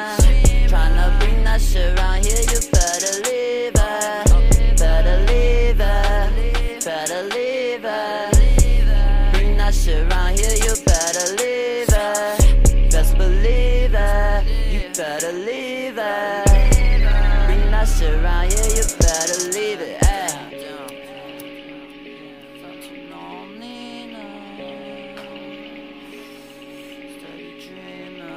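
No technical faults are audible.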